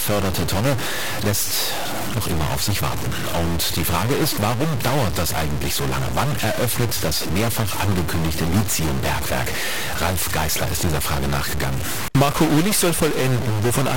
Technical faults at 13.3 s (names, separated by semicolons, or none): stuck bit